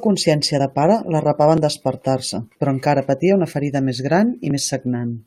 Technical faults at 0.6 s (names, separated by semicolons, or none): audio missing between chunks